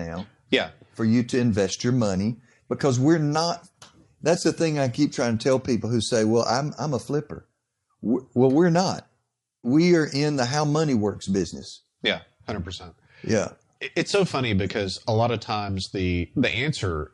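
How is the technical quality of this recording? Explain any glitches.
The speech carries plainly audible codec damage from start to finish, consistent with Bluetooth LC3 compression. The upper range sounds breathy and grainy, as if the fine detail had been swapped for a hiss that follows the sound's loudness. The likely cause is LC3 encoding at a modest rate, fitting roughly 48 kbps in 10 ms frames, where upper-spectrum content is dropped and replaced with shaped noise. Plain band-limiting would sound dull and clean instead, with no grit on top.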